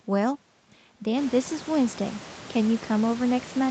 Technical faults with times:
none

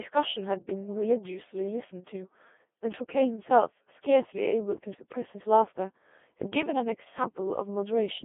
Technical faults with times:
0.00-8.24 Codec 2 vocoder
4.92-5.03 bit errors on digital voice radio

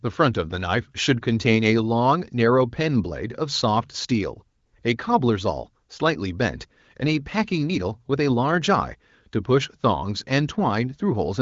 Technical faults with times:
none

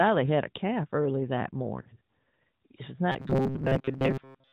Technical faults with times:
1.82-1.89 lost AMR speech frames
3.12-4.52 robotic sound from repeated short buffers

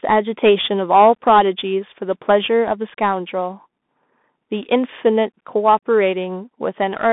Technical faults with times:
0.00-7.13 Bluetooth CVSD headset codec

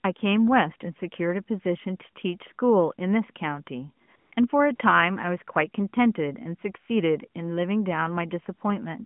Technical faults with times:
4.06-4.36 AMR comfort noise
4.76-4.80 AMR comfort noise

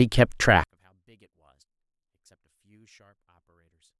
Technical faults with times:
0.64-3.99 one channel inverted

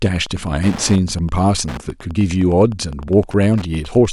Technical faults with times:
0.00-4.13 Wi-Fi interference

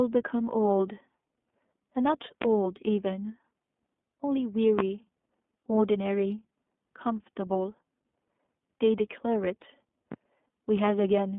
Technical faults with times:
0.00-11.38 iLBC codec
2.42-2.45 loud pop
4.79-4.82 loud pop
8.12 lost iLBC frames
10.12-10.15 loud pop

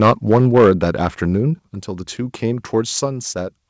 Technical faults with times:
0.01-0.71 microphone overload
0.58 microphone volume stepped down
1.59 microphone volume stepped down

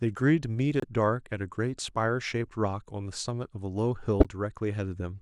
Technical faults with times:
0.80-0.84 corrupt frame decoded
4.20-4.26 corrupt frame decoded

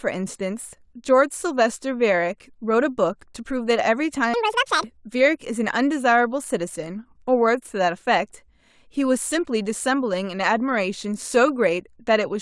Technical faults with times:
4.34-4.84 audio read two samples at a time (double speed)

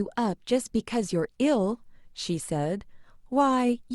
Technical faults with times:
none

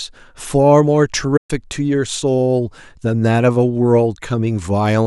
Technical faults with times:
1.37-1.51 playback stall

